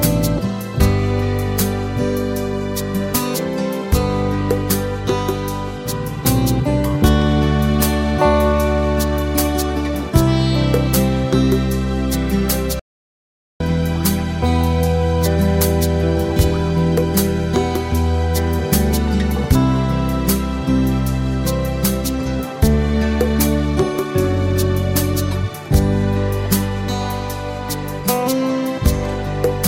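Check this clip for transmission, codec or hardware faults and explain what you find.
One fault is present: a playback stall from 12.79 to 13.60 s. The output drops to silence for about 0.81 s mid-flow, then resumes. The likely cause is the player running out of buffered data or its thread being blocked. Unlike a brief packet-loss dropout, the silence lasts most of a second.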